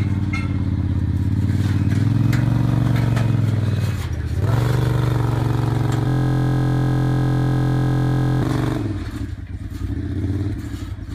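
From 6.08 s to 8.42 s the system stalls in a system hang loop: the computer or its driver stops supplying new audio, but the playback hardware keeps cycling through the same 23.22 ms ring buffer, which fits a 1024-sample buffer. That single fragment repeats about a hundred times at 43.1 Hz, so for those 2.3 seconds the sound turns into a steady, fixed 43 Hz buzz until normal output resumes.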